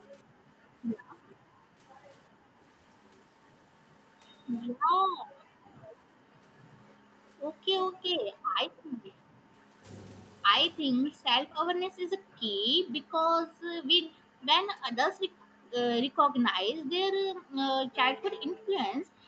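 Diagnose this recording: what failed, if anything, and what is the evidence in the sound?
The echo canceller, likely confused by both sides talking at once, turned the near talker down. This is speech suppressed in double talk: the voice dips up to about 40 dB or breaks up at 0.08–2.56 s, 4.7–9.58 s, and from 10.82 s to the end.

The same canceller also likely let loudspeaker sound through, causing echo leak. Faint scraps of voice, delayed 365 ms and about 25–35 dB below the speech, appear at 4.84–4.88, 9.04–9.15, 11.06–11.13, 15.52–15.7 and 18.52–18.61 s.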